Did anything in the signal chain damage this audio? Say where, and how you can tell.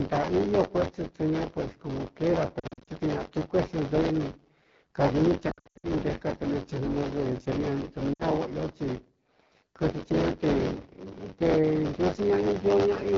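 Yes. A steady rattling buzz near 94 Hz, present only under speech, is buffer tearing at the driver, which fits a 512-sample buffer repeating stale audio.

Speech sounds rough and raspy throughout. The AMR wideband (HD Voice) codec is running at a low rate, which fits its 8.85 kbit/s mode.

Warbles and brief dips at 2.59–2.91 s, 5.51–5.87 s and 8.13–8.22 s are lost AMR speech frames from the network, patched by the decoder with fading gain.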